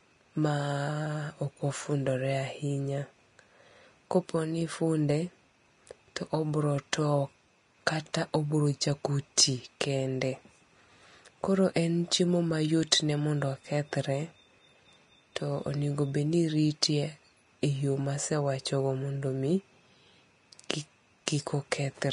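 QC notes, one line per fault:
Throughout, Vorbis compression: the speech has nothing above 10.6 kHz, and the treble that remains sounds hissy and grainy, with roughened tones and blurred consonant attacks. The damage is plainly audible and points to a low-bitrate encode, around 33 kbps. The likely cause is a Vorbis encoder at low quality, which lowers its cut-off and quantises the residue above its smooth spectral floor so coarsely that fine detail is replaced by noise of similar energy.
20.69 s and 21.26 s, pre-echo: a brief hiss arrives just before two sharp attacks, smearing them so they start softly instead of crisply. The hiss spreads about 10 ms ahead at 20.69 s and about 14 ms ahead at 21.26 s. Each attack fell late in a transform block, so quantisation noise sized for the loud onset was spread across the whole block, filling the quiet moment before the attack.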